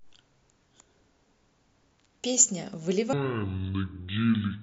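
Speech, with a section at the wrong speed from 3.13 s to the end at 4.63 s. That stretch runs at about 0.53 times normal speed, so the voice turns deep and dragging, roughly ten semitones lower. The likely cause is playback or editing against the wrong clock. On a spectrogram, the harmonics and formants drop abruptly at 3.13 s and crowd closer together, and syllables stretch wider in time. The waveform shows longer cycles and drawn-out envelopes.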